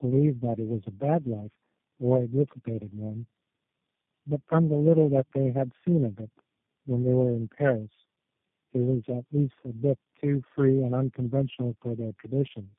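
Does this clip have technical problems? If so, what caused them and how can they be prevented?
Yes. Tandem speech coding runs through the whole clip. The speech sounds rough, muffled and warbly, which points to about four speech codecs in a row, each re-encoding the previous one's distortion. A spectrogram shows nothing above 3.6 kHz and smeared, unstable harmonics. To prevent it, keep a single codec end to end, for example with transcoder-free operation, so the call is encoded only once.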